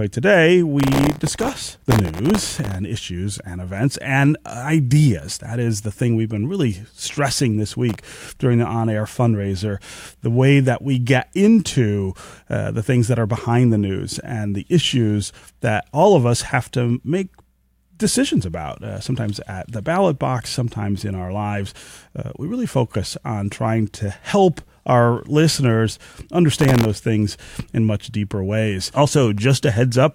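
The processor fell behind its audio deadlines in three stretches of this speech, from 0.80 to 2.75 s, from 7.89 to 8.16 s and from 26.61 to 26.85 s. Each time, very short buffers, which fits a buffer of well under a millisecond, went unfinished one after another, and stale audio was replayed with hard edges in their place. The result is processor overload crackle: a gritty, tearing layer over the speech, longest in the first burst, stopping once the load eased.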